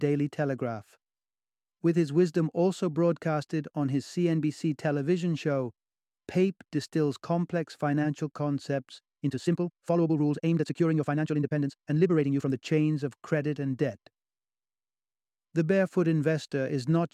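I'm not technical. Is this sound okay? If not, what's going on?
No. From 9.15 to 12.55 s there's a time-stretched section. The sound turns rushed at 1.72 times speed, but unlike fast playback the pitch doesn't rise. Software likely squeezed it to fit.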